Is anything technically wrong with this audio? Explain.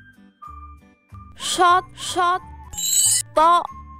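Yes. From 1.14 to 2.68 s there's a doubled audio track: a second full-band copy of the sound trails about half a second behind, a bit quieter than the original (around 5 dB down). It sounds like a dry, flat echo with no room tail. It starts and stops abruptly. Likely a second, slower capture path or two out-of-step copies left in an edit.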